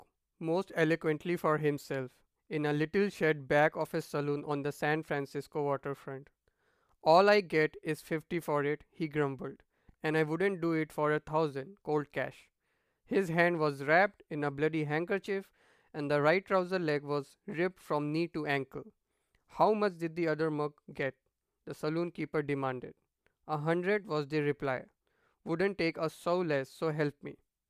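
A recording of speech with no technical faults to report. No point in it needs a time or a cause.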